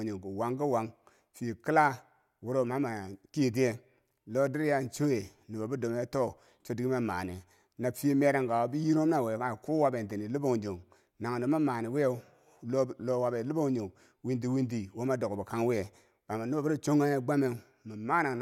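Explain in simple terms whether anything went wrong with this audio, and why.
Nothing went wrong; the speech has no audible faults.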